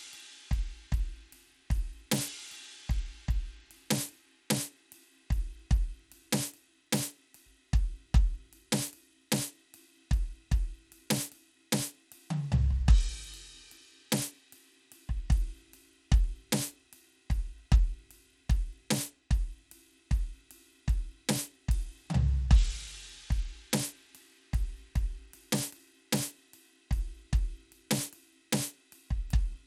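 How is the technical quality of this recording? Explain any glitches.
The music is audibly degraded throughout by what is likely Bluetooth SBC compression. Starved upper sub-bands leave flickering, dropping treble and gritty aliasing, consistent with roughly 96 kbps; a spectrogram shows a ragged, blinking top edge.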